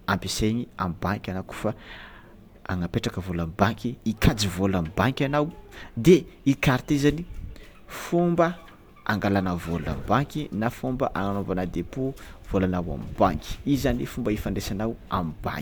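No technical faults can be heard anywhere in the recording. Nothing in the audio needs a timestamp or further comment.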